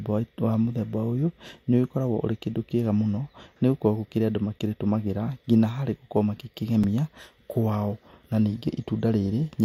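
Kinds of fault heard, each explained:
Block of digital silence: at 6.84 s the speech drops to silence for about 5 ms and then resumes, with no fade on either side. The gap is too short to hear as a hole, so it comes across as a tick or dip. On a waveform it shows as a flat line with abrupt edges. A spectrogram shows a thin vertical broadband stripe where the hard cuts spread energy across all frequencies.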